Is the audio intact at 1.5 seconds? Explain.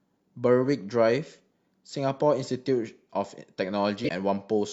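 Yes, the speech at 1.5 seconds plays through cleanly, with no dropout, click, distortion or other fault at that point.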